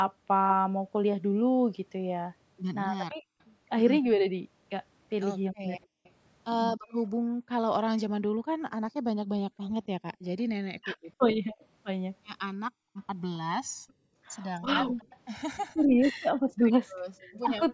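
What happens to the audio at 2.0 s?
At 2.0 s the channels are drifting apart, a fault that runs through the whole clip. The two sides seem to run on separate clocks, off by roughly 200 parts per million. The delay between them keeps growing and reaches about a millisecond and a half by the end. Summed to mono, the comb notches sweep slowly through the speech band, which reaches up to 8 kHz. The result is a slow, hollow flanging.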